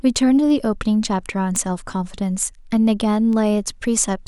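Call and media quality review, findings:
Word clock ticks, 0.15–4.04 s: around ten sharp ticks of uneven strength, roughly every 0.4 s, over the speech. Probable component: unlocked digital input (S/PDIF/AES/ADAT). Receiver clock drifts on the order of 50 ppm from the sender; each slip drops or repeats one sample.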